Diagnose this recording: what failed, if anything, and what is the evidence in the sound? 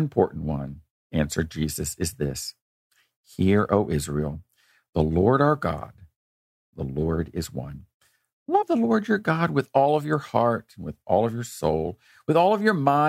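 The codec stage dropped whole compressed frames: the decoder skipped frames that were missing from the stream or rejected as damaged, so playback lurches forward. In this speech, the jumps land at 8.61 s, losing about two frames (around 50 ms), and at 11.72 s, losing about one frame (around 30 ms). Each gap fits a frame length of 26.1 ms.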